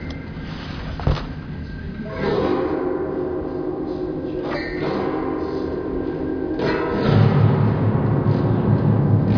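No technical faults can be heard anywhere in this sound clip.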